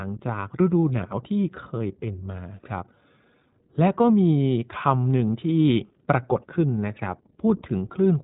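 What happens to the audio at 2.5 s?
At 2.5 s you're hearing the iLBC codec, and it runs the whole clip. Each short frame, fitting the 20 ms, 15.2 kbps mode, is coded independently, so the speech sounds plainly rough and synthetic, with nothing above 3.8 kHz.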